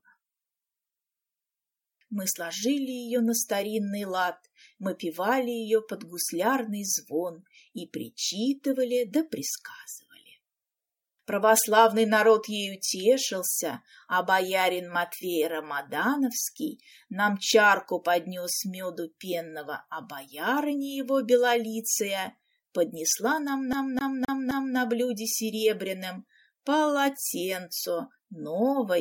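Near the end, from 23.73 to 24.77 s, the audio gets a CD stuck on one turn: the same 260 ms slice plays four times over, with a brief mute at each jump. That's a scratch knocking the laser back a track every revolution.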